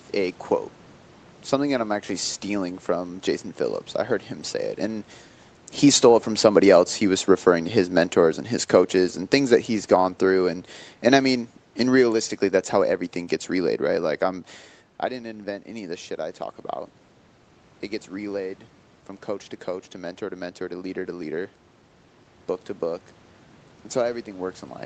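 From 5.9 s to 14.16 s the automatic gain control, judging the input too loud or its background noise too strong, gradually wound its gain down by about 8 dB. The speech and the room noise behind it sink together, settling at the lower level just before "I'm I didn't invent".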